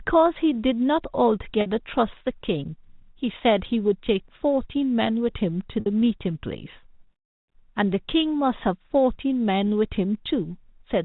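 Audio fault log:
1.61–1.66 s and 5.80–5.86 s: packet loss with pitch repetition. Each spot sounds like a brief, slightly buzzy held tone, lasting 50 ms and then 60 ms. Audio went missing, which fits roughly five and six lost packets, and the receiver bridged each gap by repeating the last pitch cycle.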